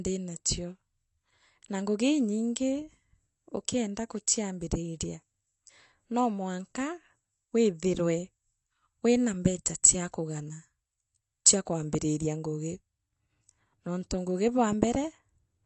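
Throughout, the speech has nothing above 8.1 kHz and sounds dull and smeared, with a fizzy, warbling texture on sibilants. The likely cause is AAC compression: the encoder coarsely quantises spectral detail and drops the top band, consistent with AAC-LC around 32 kbps.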